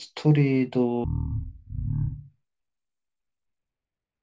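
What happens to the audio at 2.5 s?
At 2.5 s the speech is inside a wrong sample rate fault running from 1.04 s to the end. It plays at one third speed and about 19 semitones lower, which fits 48 kHz audio played at 16 kHz. A spectrogram shows harmonics squeezed down and stretched threefold in time.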